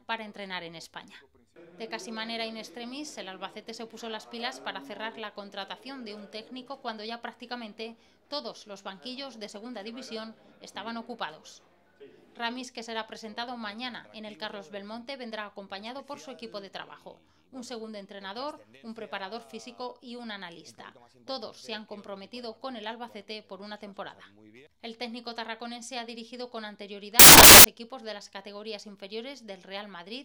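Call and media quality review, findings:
Samples built from the wrong bytes, 27.19 to 27.64 s. Loud, harsh broadband noise burst, about 0.45 s. Probable component: decoder or sample reader. Bytes misaligned or swapped. Low bits land in the high positions, so each value turns noisy.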